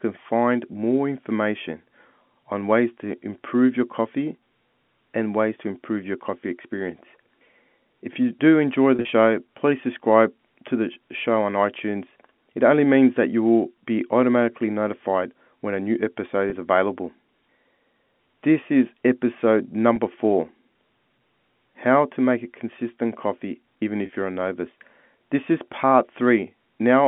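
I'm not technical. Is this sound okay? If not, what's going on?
No. The call has packet loss with pitch repetition: brief buzzy, held-over patches at 8.96 to 9.12 s (the longest, made of several small gaps), 16.50 to 16.52 s, 19.96 s and 24.06 to 24.09 s. Unlike a plain dropout, these moments repeat the preceding sound instead of going silent.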